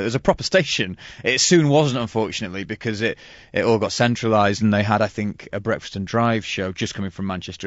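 Speech with plainly audible low-delay AAC compression throughout: the voice sounds rough and grainy, consistent with a low-bitrate setting around 32 kbps. A spectrogram would show smeared harmonics with noise filling the gaps and a thinned top band, likely from AAC-ELD's short frames.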